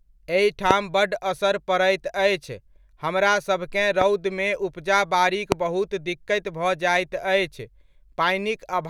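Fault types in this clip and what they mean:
Loud pop: three single sharp pops at 0.71, 4.01 and 5.52 s, each lasting about 20 ms and standing far above the speech, which continues underneath. They likely come from a sudden voltage pulse, such as a plug, switch, static discharge or driver glitch, added to the signal.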